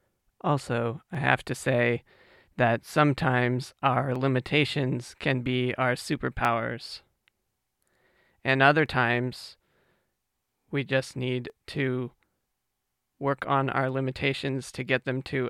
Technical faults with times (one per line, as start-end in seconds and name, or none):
1.15 dropped samples
3.20 dropped samples
4.16 dropped samples
6.45 dropped samples
8.86 dropped samples
11.50 dropped samples